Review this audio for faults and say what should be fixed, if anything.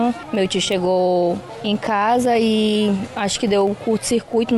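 A bit error spike sits at 0.72 s: a single sharp tick peaking at about −15 dBFS, lasting only a few samples. A flipped bit in memory or on a digital link made the sample values jump by a power of two and snap back, so the click is broadband and unrelated to the surrounding audio. Use error-checked storage and transfer, such as ECC memory and checksummed links, and repair this tick by interpolating across the damaged samples.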